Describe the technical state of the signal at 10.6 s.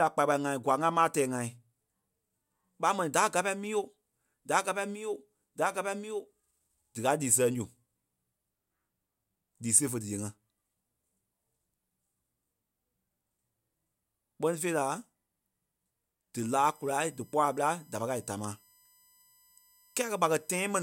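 At 10.6 s the speech signal is intact, with no audible fault at that moment.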